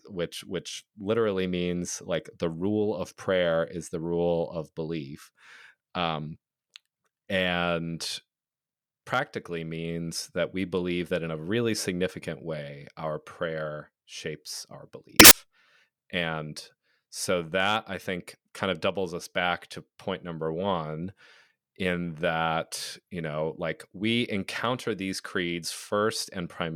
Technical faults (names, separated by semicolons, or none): samples built from the wrong bytes